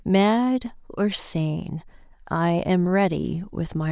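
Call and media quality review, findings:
No faults found in this call and media quality review.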